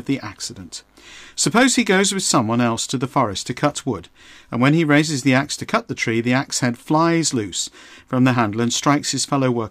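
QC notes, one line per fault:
1.47–2.36 s, hard clipping: for just under a second the speech is pushed about 4 dB past what the signal path can carry, so every peak above that ceiling is sliced off flat. The squared-off tops generate harmonics well above the speech band, heard as a gritty crackle riding on the louder syllables. On a waveform the peaks sit pinned against a level line; a spectrogram shows broadband vertical smearing reaching into the high kHz range.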